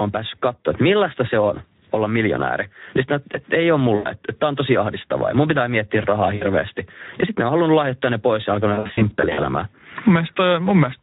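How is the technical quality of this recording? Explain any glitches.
The recording has clearly audible technical problems throughout, plus three brief dropouts.

Level pumping runs through the whole clip: quiet passages and background swell and then duck by about 15 dB under louder sound, likely from gain set too high, with a fast limiter or compressor pulling it back.

Speex codec damage is plainly audible throughout. At about 11 kbps, this low-bitrate CELP coding makes the speech noisy and hoarse, and any upper band is only a synthetic noise-like fill.

VoIP packet loss concealed by the speech codec causes three glitches:
From 3.95 to 4.10 s, right after "sitten että ei ole", about 100 ms is smeared.
From 6.35 to 6.46 s, after "mun pitää miettiä rahaa", about 60 ms is affected.
From 8.73 to 9.43 s, after "ne pois ja alkanut", about 300 ms of gaps are scattered across 640 ms, with no single gap longer than 60 ms.

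In each case the decoder stretches its last sound into a fading tone or noise, and the voice stays weakened briefly after the packets return.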